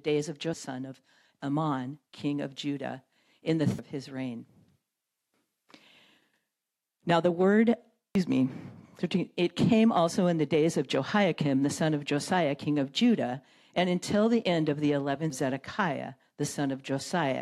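Short chirps or squawks break into the sound at 0.54, 3.79, 8.15 and 15.30 seconds, each one a brief, unnatural blip. These are damaged data in a compressed stream. At each point some of the encoded bytes were lost or corrupted, so the decoder misread those frames, lost synchronisation and had to hunt for the next valid frame header before it could resume normal output.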